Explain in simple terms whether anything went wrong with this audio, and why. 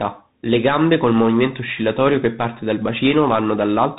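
Something did go wrong, and it lasts the whole clip, start to finish. It's tandem speech coding: the call passed through two different speech coders in a row, ending on one called CVSD. Each coder had to squeeze down speech that the previous one had already roughened. So the damage stacks up. The voice sounds grittier and a bit muffled, and nothing above roughly 3.8 kHz survives, which takes the crispness out of consonants.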